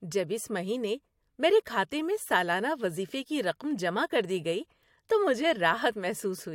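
No technical fault can be heard anywhere in this speech recording. There is nothing here that needs a time mark or an explanation.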